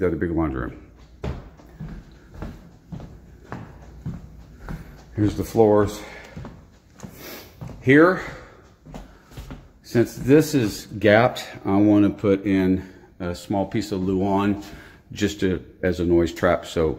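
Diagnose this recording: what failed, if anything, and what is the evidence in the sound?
Nothing in the signal chain failed: the audio carries no audible dropouts, clicks, distortion, level jumps or timing disturbances at any point, so no stage needs attention.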